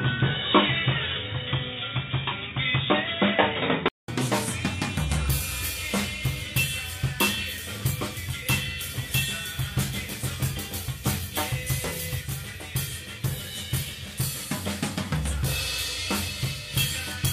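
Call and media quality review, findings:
Dull, boxy sound 0.00–4.08 s, faint extra noise floor roughly 45 dB down, level about 5 dB off, 200 ms gap at 4.08 s. Likely input switched to a poorer device, narrowband path.

Hiss rises 12.14–16.81 s, roughly 35 dB below signal, level down about 3 dB, 278 ms crossfade. Digital radio blending to analogue FM after digital signal loss.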